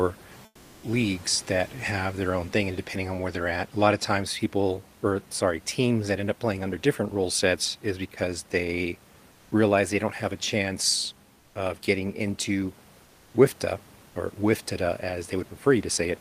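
This speech clip has comfort noise in place of the background in four pauses: 0.45 to 0.83 s, 9.31 to 9.51 s, 11.39 to 11.55 s and 13.03 to 13.33 s. In each gap, the real room noise gives way to a flat, featureless hiss. It drops about 4 dB in the first gap, about 1 dB in the middle two, and about 3 dB in the last. The likely cause is discontinuous transmission, which fits Opus DTX.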